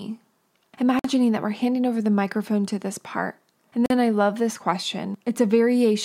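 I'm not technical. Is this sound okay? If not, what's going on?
No. There are two brief gaps at a join of encoded pieces. The speech drops out for about 50 milliseconds at 0.99 s, before "that we're handing over", and for about 40 milliseconds at 3.86 s, before "then I love this". The recording was saved in separate pieces and stuck back together without trimming the small silent padding each piece carries.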